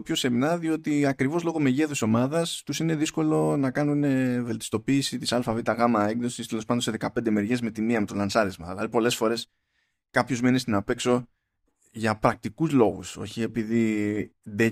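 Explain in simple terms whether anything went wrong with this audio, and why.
Nothing went wrong with this speech recording; no technical faults can be heard anywhere in it. The sound carries on steadily without any breaks, jumps or damage.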